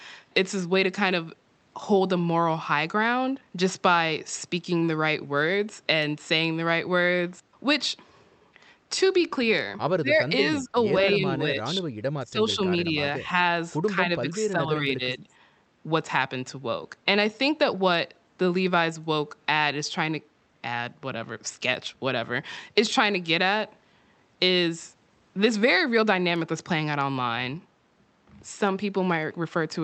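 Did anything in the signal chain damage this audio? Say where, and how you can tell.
Yes, in call processing. The speech dips at 10.01–10.78, 11.05–11.87, 12.19–12.59, 12.85–12.97 and 13.95–15.25 s, by up to about 25 dB. These show as a pinched waveform and thinned spectrogram patches. Likely speech suppressed in double talk: the echo canceller confused the talker with echo and attenuated both.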